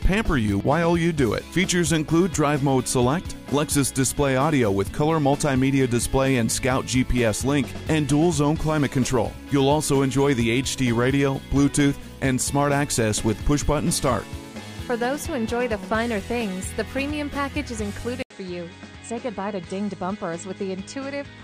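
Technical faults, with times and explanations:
18.22 to 21.43 s, input switched to a poorer device: after an 80 ms gap the sound turns duller and a little quieter, with nothing above 8.8 kHz and a faint new background hiss, likely because recording moved mid-clip to a narrower-band microphone or headset.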